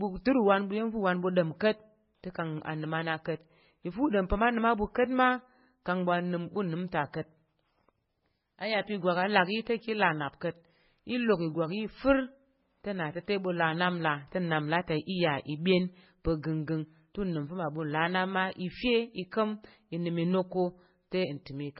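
Transcoding between lossy codecs runs throughout the clip: the speech has nothing above 5.6 kHz, giving a dull, muffled top, with smeared, watery low-bitrate artefacts layered under a second coder's texture. That fits a very low-bitrate MP3 pass, likely later re-encoded as WMA.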